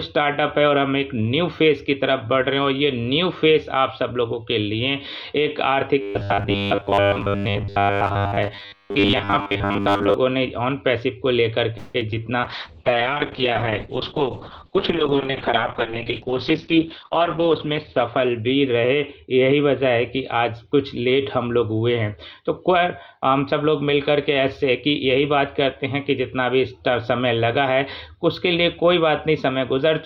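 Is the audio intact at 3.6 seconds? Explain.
Yes, at 3.6 seconds the audio is intact, with no dropout, click, distortion or other fault to be heard.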